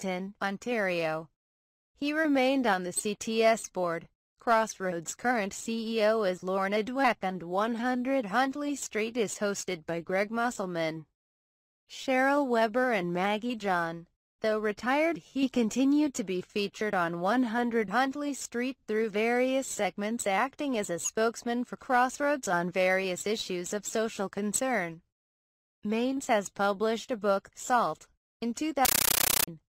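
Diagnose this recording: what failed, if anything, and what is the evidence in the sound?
At the playback stage, from 28.85 to 29.48 s, the sound is replaced by very loud, chattering static. This is a compressed stream played as audio. The digital link passed an undecoded Dolby Digital (AC-3) bitstream to the converter as if it were ordinary samples. Each frame becomes a 13.3 ms burst of noise followed by zero padding, repeating at 31.25 per second, which fits a 640 kbps AC-3 stream. That strict frame-rate gating separates it from random noise bursts or clipping.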